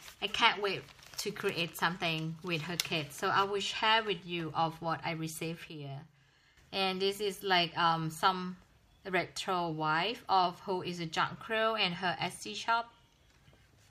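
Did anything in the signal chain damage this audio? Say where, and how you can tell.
Yes. Between 5.69 s and 6.57 s there is a sudden gain jump: the whole signal, background noise included, drops by about 10 dB at once and then snaps back. This is likely a digital gain setting applied without a ramp in the driver or processing stage. On the waveform, the envelope steps down and up with sharp vertical edges. On a spectrogram, every frequency band darkens evenly for that span, noise floor included.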